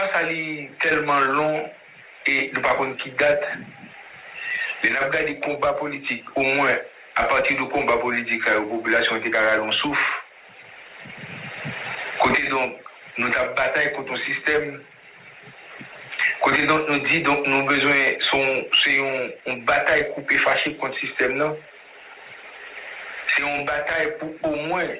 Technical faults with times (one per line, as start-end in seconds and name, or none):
none